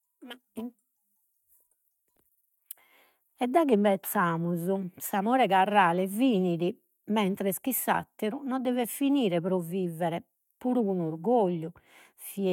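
No technical faults can be heard anywhere in the recording; the speech signal stays intact and steady throughout.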